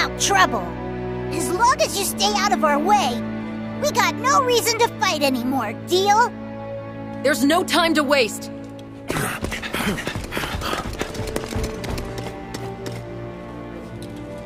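From 11.57 s to the end, a mains buzz sits about 15 dB below the sound. Sharp switching spikes, twice per 60 Hz cycle, leak into the signal path, giving a raspy, steady buzz whose harmonics reach several kHz, unlike plain hum's smooth, low tone.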